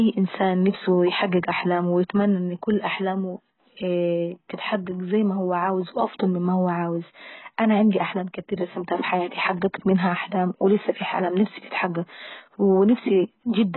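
From start to finish, the speech has nothing above about 4.1 kHz and a heavily damaged, smeared texture, most likely from AAC compression. A starved encoder like this one, which fits a very low bitrate of around 12 kbps, lowers its cut-off and quantises the remaining bands so coarsely that detail collapses. A simple low-pass filter would only dull the top end. Here the surviving band is also unstable, with a watery, warbling smear on sustained sounds and sibilants.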